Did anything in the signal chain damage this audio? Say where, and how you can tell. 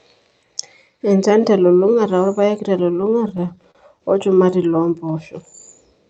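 Yes. Between 3.01 and 4.02 s the speech drags and stutters in about ten small hitches, the longest around 37 ms and roughly 122 ms stretched in total. That is repeated stalls (stutter) at the network and jitter-buffer stage: packets arrived late, the buffer repeatedly ran dry, and the receiver extended the last sound until data resumed, so nothing is lost.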